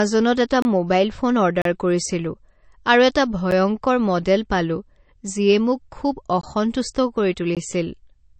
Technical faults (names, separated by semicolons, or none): MP3 compression; block of digital silence